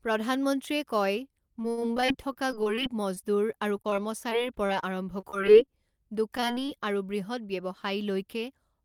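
Choppy, robotic-sounding speech breaks up from 1.59 to 3.94 s, again from 5.20 to 5.69 s, and from 6.37 to 6.70 s, just before "আৰু বূহৎ". This is repeated packet loss (robotic sound). Audio kept failing to arrive in time, and each hole was patched by stretching out the sound just before it. In the first stretch the holes add up to about 0.3 s and the longest is about 60 ms. The two later stretches have shorter holes, the longest about 21 ms. Around 4.30 to 4.43 s, 4.67 to 4.70 s and 4.80 to 4.84 s there are three brief smears or wobbles instead. Each is a short concealed packet loss, where about 20 ms of audio went missing and the receiver covered it by continuing the previous sound before blending back into the real signal.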